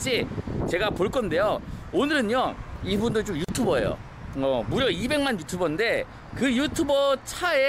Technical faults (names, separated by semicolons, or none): gap at a join of encoded pieces